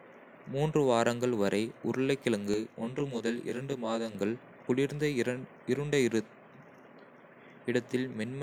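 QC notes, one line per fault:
2.54–4.15 s, channel delay (comb filtering): one channel lags the other by about 20 ms, so the mono sum cancels at evenly spaced frequencies from around 20 Hz upward, making the speech sound rough and slightly doubled. A spectrogram shows fixed horizontal notch stripes, and the waveform shows a short doubled echo.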